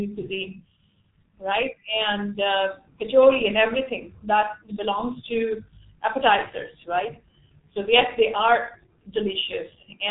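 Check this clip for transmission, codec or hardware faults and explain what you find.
One fault runs through the whole speech clip: G.723.1 codec damage, heavy throughout. This low-rate telephony coder models speech in 30 ms frames, and the thinness of the result fits its 6.3 kbit/s mode. Its coarse, slowly updated spectral model smears fast articulation, so consonants blur and the tone turns hoarse. Nothing above 3.8 kHz survives, leaving the speech muffled, with sibilants dulled and no air at the top.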